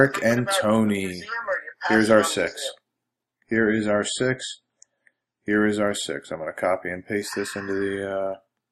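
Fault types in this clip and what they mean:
Adaptive stream at a lower bitrate: the connection slowed, so the player switched to a leaner stream. From 3.46 to 5.46 s, everything above 9.3 kHz vanishes and codec artefacts swell, fitting a fall from 128 to 24 kbit/s MP3. Unlike a dropout, there is no gap.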